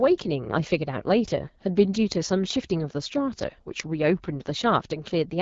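Throughout, AMR wideband (HD Voice) coding leaves the speech rough and raspy, fitting its 8.85 kbit/s mode; a spectrogram shows smeared harmonics and nothing above 7.5 kHz.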